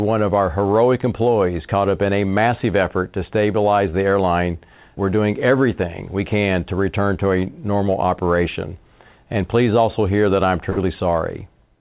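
At 10.7 s, after "also hear that I'm", a burst of packet loss cuts about 60 ms, to 10.83 s. The last sound is stretched into a fading buzz before speech jumps ahead. A spectrogram shows flat, smeared bands dimming out below the call path's 4 kHz ceiling.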